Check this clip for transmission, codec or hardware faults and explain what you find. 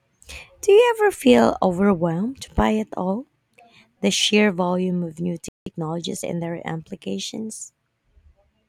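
Two related faults show up in this speech clip, both right after "sheer volume of new".

At 5.48 s the speech cuts out mid-flow and stays silent for about 0.18 s, until 5.66 s: a playback stall. The player most likely ran short of buffered data or had its output thread held up, so nothing reached the output until it recovered.

From 5.66 s to 6.36 s the speech comes back hurried, about 1.25 times normal speed, but at its usual pitch. This is time-compressed catch-up: the player trims small slices and cross-fades across the cuts to work off the backlog the stall built up.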